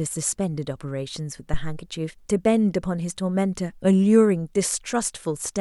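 At 1.54 s, a phantom power thump: a supply step through coupling capacitors gives a deep thud, about −11 dBFS, decaying within 79 ms, with none of a plosive's breathiness.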